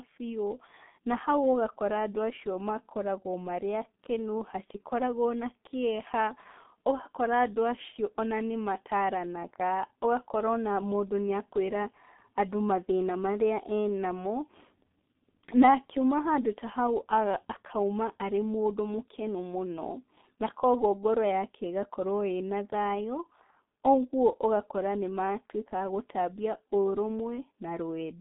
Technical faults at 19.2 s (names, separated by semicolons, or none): G.723.1 codec